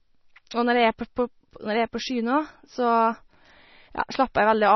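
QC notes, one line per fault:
throughout, MP3 compression: the speech is heavily swirly and watery with nothing above 6 kHz, likely an encoder starved of bits, which fits about 24 kbps.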